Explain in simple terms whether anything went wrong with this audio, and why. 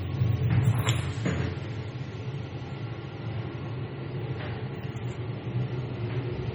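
Yes, something went wrong: the whole clip, start to finish, has the watery, swirly sound of heavy MP3 compression, likely from being squeezed into a very small file. The encoder didn't have enough room, so it chopped off the top end, making everything dull, and threw away quieter details that now flicker in and out. That flicker is the warbly, underwater quality, and sharp hits lose their crispness and smear.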